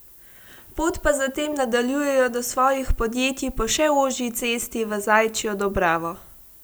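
From start to finish, the speech carries low bit depth with noise shaping. The signal sits on about 9 bits. Feedback of the rounding error pushes that error upward in frequency. The result is a steady, thin hiss, rising strongly toward the top, roughly 25 dB below the speech.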